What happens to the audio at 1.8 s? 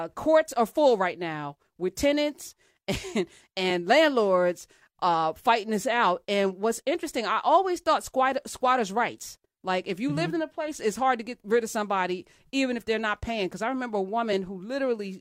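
Nothing goes wrong at 1.8 s; the speech there is intact, with no dropout, click, distortion or other fault.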